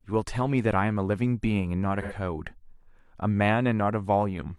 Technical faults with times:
2.01-2.13 AAC frame loss with concealment

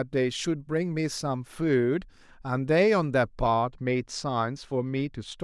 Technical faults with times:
3.47-5.38 channel delay (comb filtering)

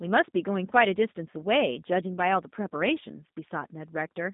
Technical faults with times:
0.00-4.33 G.729 codec

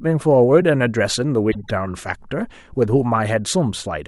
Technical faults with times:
1.51-1.70 corrupt frame decoded

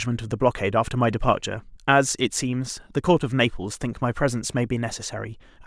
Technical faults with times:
none

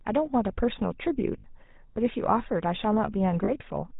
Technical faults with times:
0.00-4.00 GSM full-rate codec
1.38-1.45 lost GSM frames
3.44-3.52 lost GSM frames

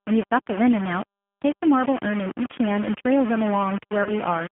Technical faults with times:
0.00-4.52 low bit depth without dither
0.00-4.52 G.729 codec
4.03-4.12 VoIP packet loss concealed by the speech codec

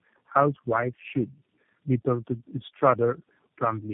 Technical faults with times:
0.00-3.94 tandem speech coding

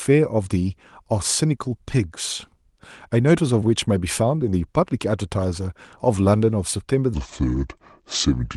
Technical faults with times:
7.14-8.56 section at the wrong speed

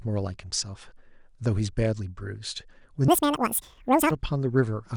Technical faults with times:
3.08-4.11 wrong sample rate

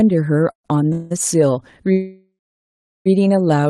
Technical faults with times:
0.51-0.66 call audio freeze
0.92-1.12 call audio freeze
1.92-3.08 call audio freeze

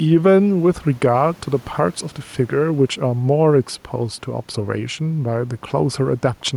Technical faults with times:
0.00-6.57 gain pumping

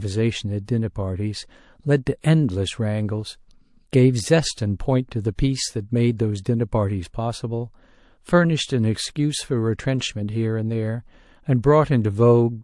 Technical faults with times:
0.00-12.64 MP3 compression
0.65-0.68 pre-echo
5.35-5.39 pre-echo

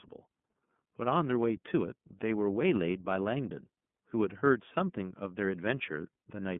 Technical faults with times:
0.00-6.59 iLBC codec

